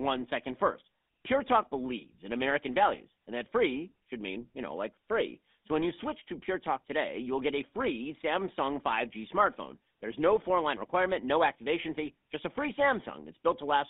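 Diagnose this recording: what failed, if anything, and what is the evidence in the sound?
The speech sounds buzzy and gravelly from start to finish, squeezed into a narrow band from about 250 Hz to 3.6 kHz. This is the GSM full-rate codec: a vocal-tract model driven by coarsely sampled pulse excitation, which fits a 13 kbps coder.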